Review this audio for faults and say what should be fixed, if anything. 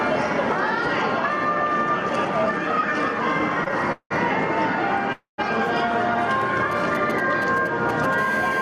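Throughout the clip the level keeps breathing, and loud and quiet passages sit unnaturally close together. This is gain pumping, with the level moving by roughly 5 dB. It likely comes from the input gain being set far too high for the microphone, so a fast limiter or compressor clamps down on every peak and releases in the gaps. Lower the input gain so the limiter rarely engages.

From 3.64 to 4.12 s the sound drags and catches four times, with about 226 ms of held-over sound in all. The longest hold is 184 ms, and nearly half of that stretch is filler rather than fresh audio. These are repeated stalls (stutter). Packets kept arriving late or slower than playback, so the jitter buffer ran dry again and again and the receiver stretched the last sound each time. Nothing is lost, but the timing is broken. A larger or adaptive jitter buffer and a steadier network path would prevent it.

Between 5.12 and 5.40 s the audio hangs on a fading continuation that drops to silence for about 140 ms, then resumes exactly where it stopped. 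This is a call audio freeze lasting about 257 ms. The likely cause is packets held up in transit, which emptied the jitter buffer and shifted the playout delay by that same 257 ms. No audio is missing, but a gap has been inserted. Fix the congestion or routing problem that is delaying packets.

From 6.71 to 8.15 s a galloping dit-dit-dit of short raspy buzzes cuts across the sound at around 10 dB below it. These are GSM signalling bursts. A nearby 2G phone was sending short groups of radio bursts at 217 Hz while signalling, and the audio circuit rectified them into audible pulses. Keep mobile phones well away from the microphone, cables and interface, or use better-shielded gear.

From 8.18 s to the end the bursts turn into a continuous hard, raspy GSM phone buzz at 217 Hz, rich in harmonics, sitting about 12 dB below the signal. It is unrelated to the wanted sound. It comes from a nearby 2G phone in a call, transmitting 217 bursts per second, with the pulses rectified by the audio circuitry. 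Moving the phone away or switching it off, and shielding the audio chain, removes it.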